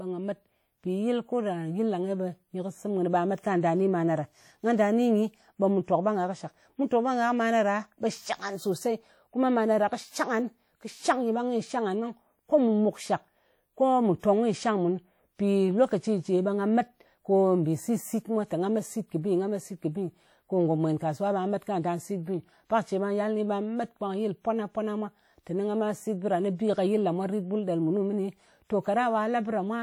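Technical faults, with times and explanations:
throughout: WMA compression. The speech rings and sounds washy, with a hiss that breathes along with it, likely from a Windows Media Audio encoder near 48 kbps spreading quantisation noise across long blocks. A spectrogram shows speckled gaps where weak partials vanish, smeared onsets, and energy ending at 20.1 kHz.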